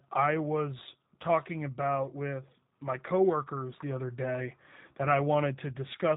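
G.729 codec coding runs throughout this speech clip: everything above 4 kHz is missing, and the voice sounds plainly rough and synthetic, as if rebuilt from a vocal tract filter, pitch prediction and a few pulses per 10 ms frame, which fits an 8 kbit/s G.729A stream.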